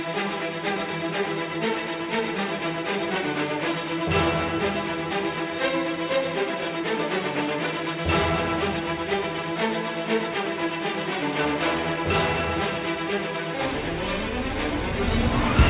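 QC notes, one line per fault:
No faults found on listening, with no dropouts, clipping, glitches or level problems anywhere in the clip.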